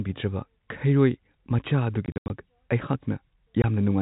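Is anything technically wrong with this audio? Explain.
Yes. There is packet loss filled with silence: from 2.06 to 2.3 s, about 160 ms of audio drops out in hard-edged gaps of up to 80 ms, and a single 20 ms hole at 3.62 s fits 20 ms packets. Missing packets were replaced by silence rather than concealed, so the result is dead holes rather than smeared or repeated sound. The band-limited telephone tone of the G.711 coding is expected and is not part of the fault.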